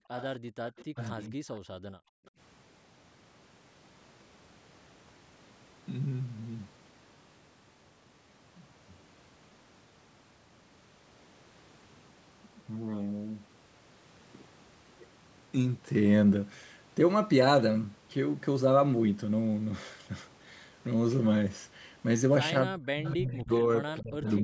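At the very start, 0.00 to 0.11 s, the echo canceller clamps the microphone while the far end's loudspeaker is playing, so the room background is gated: the ambience drops by about 40 dB for roughly a tenth of a second, then returns. The same background gating by the echo canceller recurs at 0.42 to 0.55 s, another brief hole, and again at 1.65 to 2.32 s, where the room sound vanishes for about half a second.

From 0.18 to 1.27 s the canceller likely fails to subtract everything its microphone picked up from the loudspeaker, so an echo leak is returned down the line. A faint copy of the speech trails it by about 253 ms, sitting around 20 dB below the talker.

Overlapping this, 0.94 to 1.37 s, the talker's speech is suppressed in double talk, likely because the canceller could not separate the near talker from the loudspeaker echo while both spoke. The voice dips by roughly 15 dB for around 150 ms.

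Near the end, 22.65 to 24.28 s, the same double-talk suppression is far heavier: the speech is pushed down by around 35 dB over about a second. Within that stretch, echo leaks return at 23.08 to 23.40 s and 23.98 to 24.42 s, again 253 ms late and about 25 dB down. The band-limited sound, with nothing above 8 kHz, comes from the normal call microphone processing.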